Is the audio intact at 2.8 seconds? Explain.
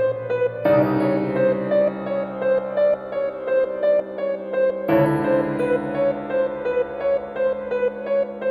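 Yes, the audio is intact at 2.8 seconds, with no dropout, click, distortion or other fault at that point.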